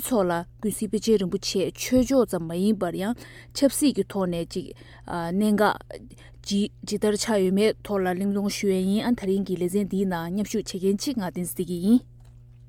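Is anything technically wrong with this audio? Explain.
Yes, there is mains hum running through the whole clip: a steady low tone at 60 Hz, sitting roughly 25 dB below the main sound, with some low harmonics above it. Power-line current leaks into the signal path, typically through a ground loop or a nearby transformer, and rides under everything. Rumble from handling or wind is broadband and fluctuates, but this tone holds a fixed pitch and level from start to finish, locked to the mains frequency.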